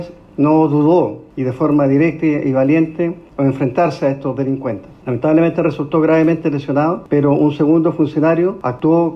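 Nothing in this audio stands out as a technical fault, so there's no problem here to point to at any moment in the clip.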